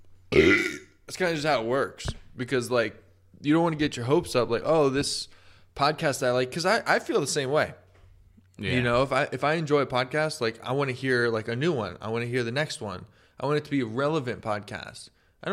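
No technical faults can be heard anywhere in this speech recording. Nothing in the audio calls for a timestamp or an explanation.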